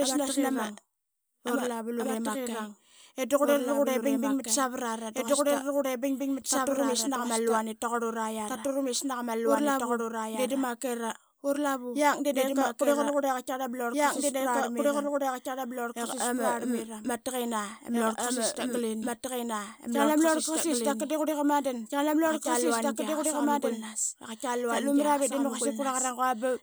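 A speech recording with a doubled audio track running through its whole length: a second, full-band copy of the speech trails the original by roughly two seconds at about the same level, so every phrase returns intact, without decay or room colour, on top of the next. It is likely captured twice, once through a slower path, or held as two out-of-step copies in an edit. On a spectrogram, each burst of harmonics reappears, identical in shape and brightness, about two seconds later; the waveform shows matching envelopes repeated at that fixed offset.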